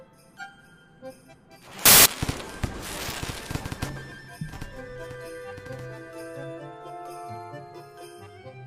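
From 1.86 to 2.06 s, about 0.2 s, the audio breaks into loud, harsh broadband noise from samples built from the wrong bytes. The reader has misassembled each sample's bytes, so the fast-changing low bits now dominate each value. On a spectrogram this appears as a full-band block; the waveform shows a dense, loud slab.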